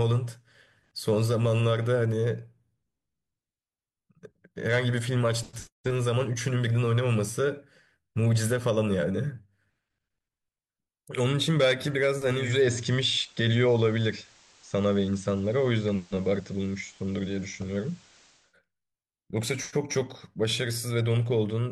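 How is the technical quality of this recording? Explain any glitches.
The recording has one clear glitch, in the second half.

From 12.3 to 18.6 s, hiss rises to around 30 dB below the speech, and the level shifts by about 2 dB. This is digital radio blending to analogue. The receiver lost its digital signal and cross-faded over 313 ms to the station's FM broadcast, then back.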